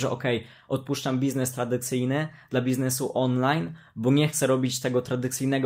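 Nothing goes wrong anywhere in this bit of speech, so there's no fault to point to at any moment.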